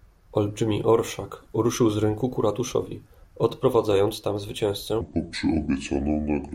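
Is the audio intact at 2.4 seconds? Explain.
Yes, the audio is intact at 2.4 seconds, with the speech continuing there without any audible dropout, click, distortion or other fault.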